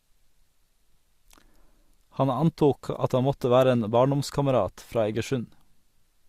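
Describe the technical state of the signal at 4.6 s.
At 4.6 s the speech signal is intact, with no technical fault audible at that moment.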